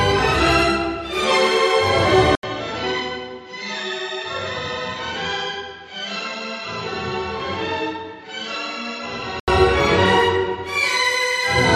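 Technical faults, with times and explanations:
2.35–9.48 s, input switched to a poorer device: after an 80 ms gap the sound goes dull and roughly 10 dB quieter, with nothing above 7.6 kHz and fresh background noise some 35 dB down, likely a jump to a lesser microphone, then it clears again.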